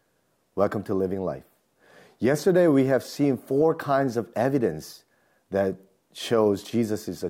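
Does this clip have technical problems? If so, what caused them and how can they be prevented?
No, there are no technical problems to report in this speech clip. Since nothing went wrong, there is nothing that needs preventing.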